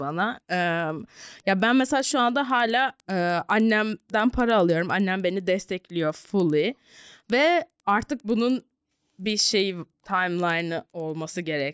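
Throughout the speech, a resampler restarted on every block mishandles each 100 ms block edge, leaving steady ticks at 10 Hz, consistent with 44.1 kHz-to-16 kHz conversion done block by block.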